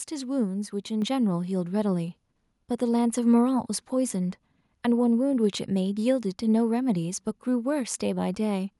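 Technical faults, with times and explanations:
1.02 s, microphone volume stepped up: right here the whole level of the speech jumps by about 5 dB in one go, and the background noise rises right along with it. That shared jump is the giveaway. The call software decided the mic was too quiet and bumped the device's input volume in a single step, so everything coming into the mic gets louder at once instead of easing up gradually.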